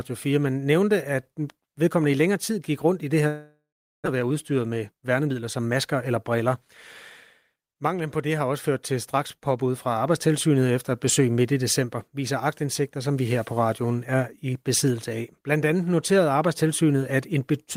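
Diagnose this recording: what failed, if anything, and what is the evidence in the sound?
Right after "gik rundt i det", at 3.27 s, the real audio stops. For about 0.78 s the receiver keeps the last sound going as a buzz or hiss that fades, and about 0.41 s of that is close to silence. Audio returns at 4.08 s, but roughly 0.6 s of the original never comes back. That's most likely a long network dropout: packets stopped arriving, and concealment covered the gap until it ran out of material.

Straight after that, from 4.15 to 6.11 s, the sound runs about 8 percent fast while the pitch stays put, so it comes across a bit hurried. That's jitter buffer speed-up. The delayed packets landed in a bunch and left the buffer deeper than its target, so the receiver kept snipping out short pieces one or a few pitch periods long. Together those cuts trimmed off something like 150 ms of extra delay.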